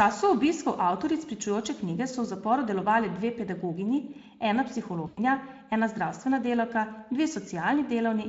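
At 5.07 s, after "delovale dve pedagoginji ena", VoIP packet loss concealed by the speech codec: about 100 ms of packets vanished, and the decoder extrapolated, smearing the speech into a fading buzzy tone or coloured noise until 5.19 s.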